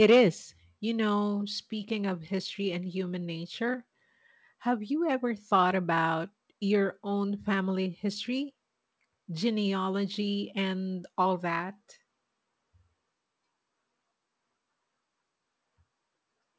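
There are no technical faults to describe in time order in this speech clip, which came through a G.722 call path at 64 kbps that leaves nothing above 8 kHz.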